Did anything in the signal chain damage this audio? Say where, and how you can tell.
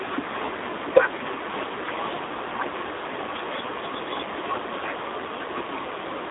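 Yes, at the codec stage, with G.729 codec damage throughout. The speech sits in a 300 Hz to 3.7 kHz line band, with nothing above 3.8 kHz. It sounds rough and synthetic, which fits an 8 kbit/s G.729A stream rebuilding speech from a vocal tract model and sparse pulses.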